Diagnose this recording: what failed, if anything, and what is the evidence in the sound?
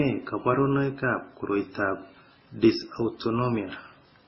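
Codec stage. Throughout, the speech has nothing above 5.7 kHz and layered, mismatched smearing. This is likely transcoding between lossy codecs, each re-encoding the previous one's artefacts.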